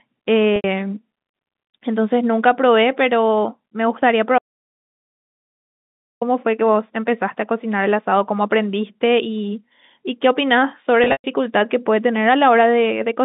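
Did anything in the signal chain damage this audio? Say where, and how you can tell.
Yes. At the network stage, packet loss with pitch repetition hits 0.56 s (80 ms) and 11.04–11.24 s (160 ms scattered, longest run 120 ms). The waveform shows identical repeated pitch cycles decaying, heard as a buzzy held tone.

An audio dropout to silence runs from 4.38 to 6.21 s, about 1.8 s. It is a dead-flat silent line, blank on the spectrogram with no room tone, likely from a lost input or link upstream.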